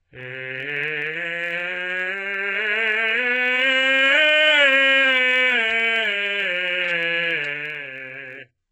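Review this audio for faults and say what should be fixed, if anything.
Throughout the music the top end is heavily damaged: the upper band sounds synthetic, with cymbal-like content turning gritty and metallic rather than clean. The cause is likely HE-AAC compression at a very low rate, consistent with about 8 kbps. Only the lower spectrum is truly coded. The treble is rebuilt by copying lower bands upward under a coarse envelope, so its harmonics no longer line up with the real ones. To prevent it, encode at a substantially higher bitrate or use plain AAC or another full-band codec for music.

A steady buzz at 43.1 Hz runs for the whole clip. This is a block size mismatch (truncated): one stage writes longer blocks than the next stage consumes, and the tail of each block is discarded. The buzz rate fits blocks of 1024 samples. Each discard leaves a discontinuity, and those discontinuities repeat at the block rate. 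The size difference here is small, so tempo and pitch are essentially unchanged and the buzz is the audible symptom. To prevent it, make the block size the writer produces match what the reader expects, or buffer the output so nothing is dropped.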